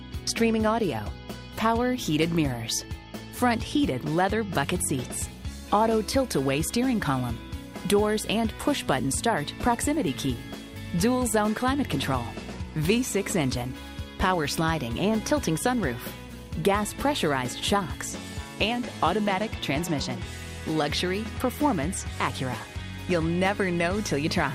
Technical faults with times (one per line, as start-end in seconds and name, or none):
none